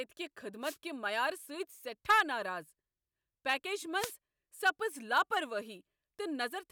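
The analogue FM radio link from the wireless microphone fades twice as reflected signals cancel, letting receiver noise surge over the speech: a wireless microphone noise hit from 0.62 to 0.77 s and again from 3.97 to 4.14 s, each a brief swish of static.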